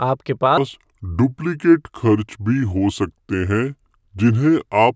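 From 0.58 s to the end, the speech plays at the wrong sample rate. Audio recorded around 22 kHz runs at 16 kHz, slowing it to 0.73 times speed and dropping pitch about 5.5 semitones.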